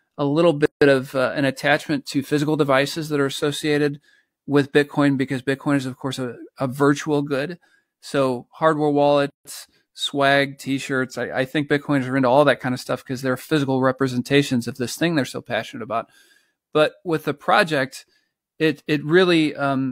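Separately encoded pieces of this speech were joined without trimming encoder delay and end padding, leaving a gap at each join of encoded pieces: gaps of 159 ms at 0.66 s and 151 ms at 9.30 s, with smeared edges before speech resumes.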